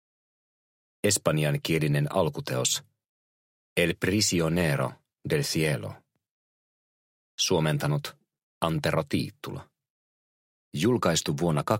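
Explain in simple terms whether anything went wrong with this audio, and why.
Nothing went wrong here, as far as a listener can tell: there are no glitches, dropouts or odd noises anywhere in it.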